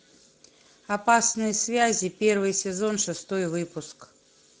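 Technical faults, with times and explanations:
Throughout: Speex codec damage. The speech sounds plainly noisy and hoarse. Speex models the voice with a coarse excitation signal, and too few bits go to describing it. The degradation fits a bitrate of around 16.8 kbps.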